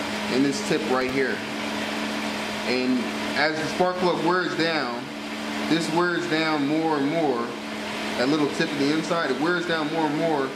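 Right around 0.95 s you get a short burst of processor overload crackle that runs until about 1.10 s. What's going on there is the machine falling behind on very small buffers, each under a millisecond, and missing a handful of deadlines in quick succession. Every miss gets filled with a scrap of old audio with hard edges, so for that brief stretch the sound picks up a gritty, tearing crackle before things settle.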